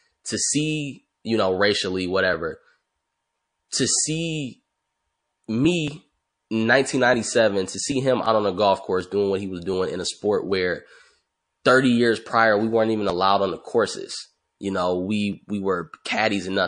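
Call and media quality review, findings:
MP3 compression, whole clip: likely a low-bitrate MP3 encoder starving the upper bands, consistent with about 40 kbps. Weak components flickering frame to frame; speech sounds watery and swirly, sibilants metallic, consonant onsets smeared.

Pre-echo, 3.69–3.71 s: encoder held a long block of about 52 ms over a sharp attack, no switch to short blocks. Quantisation noise spreads backwards about 24 ms, roughly 12 dB up: audible hiss before the onset, attack softened.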